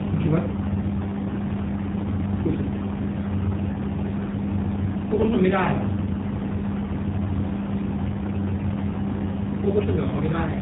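Throughout, the speech sounds rough, muffled and warbly with nothing above 3.8 kHz, the mark of tandem speech coding, which fits GSM re-encoded as G.729A.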